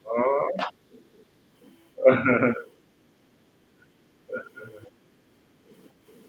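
A speech recording with echo-canceller artefacts in three forms. From the very start to 0.73 s, and again from 1.96 to 2.31 s, the talker's level sags, by roughly 20 dB in the first stretch and roughly 15 dB in the second. This is speech suppressed in double talk, likely caused by the far end talking at the same moment: unable to separate the local voice from loudspeaker echo, the canceller attenuated everything together. Between 4.82 and 4.87 s a brief scrap of the other side's voice leaks through, faint at roughly 30 dB below the talker. The likely cause is residual loudspeaker echo that the canceller left in the microphone signal. It is short enough to register as a small fragment rather than a continuous second voice. From 5.39 to 5.65 s the room ambience is gated by the echo canceller. The background drops by about 9 dB while the loudspeaker plays, as the canceller pulls the microphone down hard. 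The room tone comes back once the canceller releases, so the dip is audible as a momentary hole in the ambient sound.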